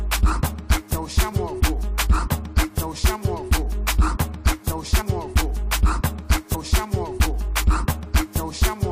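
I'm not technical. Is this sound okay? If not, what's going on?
No, there are two problems.

First, compressed frames skipped: at 1.31 s, 5.00 to 5.02 s and 6.54 to 6.56 s the sound jumps ahead slightly. Small chunks of the compressed file, roughly a frame or two, never got played.

Second, from 6.10 to 8.70 s there's a grainy, sandpapery roughness riding on the sound, worst in the quieter bits. That's likely low bit depth without dither: the audio was rounded to very few levels, about 9 bits' worth, with nothing to smooth the steps.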